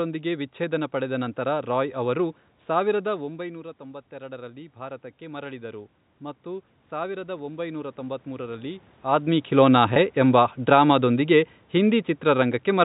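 From 3.11 to 8.89 s, just after "ನಂತರ ರಾಯ್ ಅವರು ಸಾವಿರದ", the voice and room noise swell together slowly. This is automatic gain rising: the talker's level fell by about 15 dB, and the control raised its gain by about 10 dB over nearly six seconds.

At 9.94 to 9.96 s there is a brief, slightly held buzzy sound. This is packet loss with pitch repetition: about 20 ms of audio, which points to a single lost packet, was bridged by repeating the last pitch period.

From 9.46 to 12.8 s the speech sinks in level along with its background. This is automatic gain falling: the control pulled its gain down by about 4 dB gradually rather than at once.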